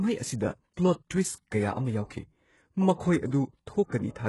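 From the start the speech has that heavy low-bitrate sheen that points to HE-AAC compression, likely at something around 12 kbps. The top of the spectrum is being rebuilt rather than carried: lower bands get copied upward and shaped with a rough envelope, so the treble has brightness but the wrong detail. S sounds come out gritty and a bit lispy, and there's nothing at all above about 11.5 kHz.

Around 1.1 s there's a quick pre-echo, a hiss spreading roughly 12 ms ahead of a sharp onset. The codec spreads its quantisation noise across a whole block. Because the attack lands late in that block, noise sized for the loud part leaks into the quiet moment just before it. That softens the transient and leaves it sounding smeared instead of crisp.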